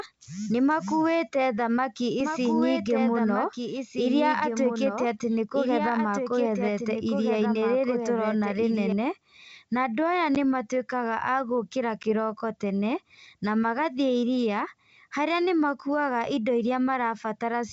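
Right after "nĩmakuĩte thamaki", at 2.20 s, a doubled audio track kicks in and runs until 8.92 s. A second, full-band copy of the same speech trails the original by about one and a half seconds, roughly 5 dB quieter. It has no reverb tail or room colour, and it switches on and off abruptly. That's most likely the signal being captured twice, with one path lagging well behind the other, or an edit leaving two copies out of step.

Then there are two spots of packet loss on an ADPCM call, at 10.35 s and again between 12.03 and 12.06 s. Each time about 10 ms of audio drops to hard-edged silence, which fits one lost packet. The gap isn't the only problem. The decoder's adaptive predictor and step size lose sync with the sender, so the speech comes back with a little grit before it settles over the next few tens of milliseconds.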